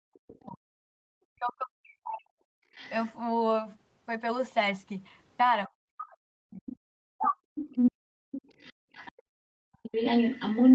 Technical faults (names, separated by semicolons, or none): speech suppressed in double talk; other side's voice leaking through; background gated by the echo canceller